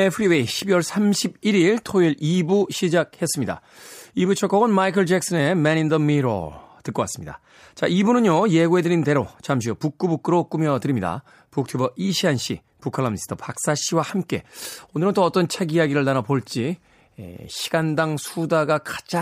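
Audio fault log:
14.28 s pre-echo. A short hiss precedes a sharp speech onset by 11 ms, about 12 dB above the quiet before it. Codec noise sized for the attack fills its whole block, which fits a 26 ms window without short blocks. The onset sounds smeared.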